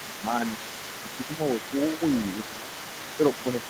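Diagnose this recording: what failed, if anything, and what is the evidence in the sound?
A faint second voice runs underneath the talker for the whole clip, well below it. That's likely the other side's voice leaking through past the call's echo canceller.

The talker dips by a few dB at 1.28–1.4 s and 2.51–2.71 s, likely speech suppressed in double talk as the canceller turned everything down.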